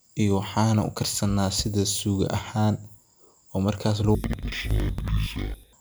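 From 4.15 s to the end, interleaved audio is read as planar. Each 93 ms block, which fits a 4096-sample buffer, splits wrongly into halves. Speech drops an octave, doubled and choppy at 10.8 Hz.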